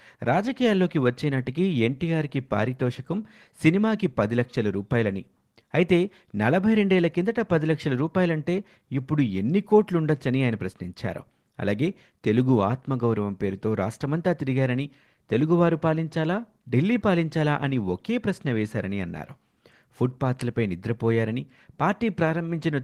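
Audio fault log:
No fault in this speech clip.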